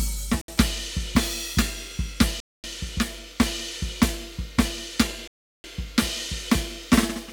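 The music drops to silence three times: at 0.41 to 0.48 s for 68 ms, at 2.40 to 2.64 s for 236 ms, and at 5.28 to 5.64 s for 365 ms. Each is most likely a Bluetooth stall: interference held back packets, the headphone buffer emptied, and playback waited for retransmissions. Unlike a clean edit or a skipping file, the music halts abruptly into true silence and then picks up where it stopped.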